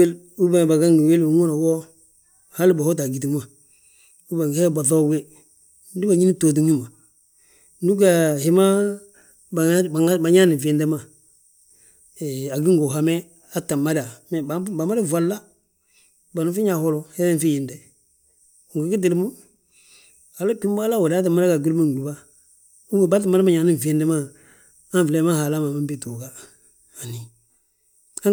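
No technical faults can be heard anywhere in the speech.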